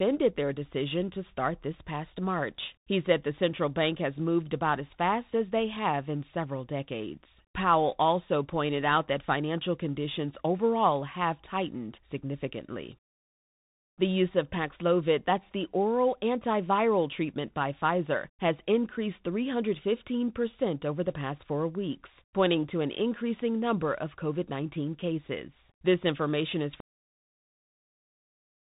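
A speech recording heard through a narrow, boxy telephone band, with scratchy s sounds, harsh distortion on loud bright syllables and a fine granular hiss beneath the voice throughout, all typical of the Bluetooth CVSD headset codec. Each sample is a single up-or-down bit whose step size adapts, which fits a 64 kbps link, so fast loud changes outrun the step, and nothing above 3.8 kHz gets through. At 26.80 s, right after "information is", the speech stops dead mid-sound and drops straight to digital silence with no decay, lasting until 28.72 s. This is a cut-off end: the final buffers were never written or played out, so the recording simply ends.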